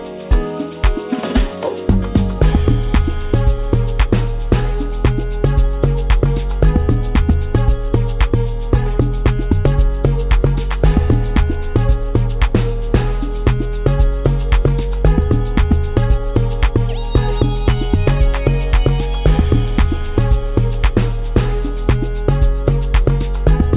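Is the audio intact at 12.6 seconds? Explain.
Yes, at 12.6 seconds the audio plays through cleanly, with no dropout, click, distortion or other fault at that moment.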